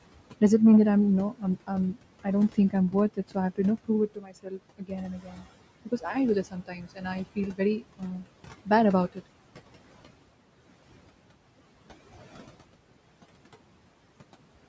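Noise suppressor artifacts run through the whole speech recording: the suppressor pulls the room noise down by about 18 dB between phrases, lowering it frame by frame. Speech cut by the noise suppressor occurs between 1.31 and 5.46 s and again between 6.45 and 8.26 s. Soft sounds mistaken for background are pushed down by up to about 18 dB and about 17 dB, leaving roughly a second and a half, then well under a second, swallowed. The room noise itself sits about 18 dB below the voice, and the call microphone path carries nothing above 8 kHz.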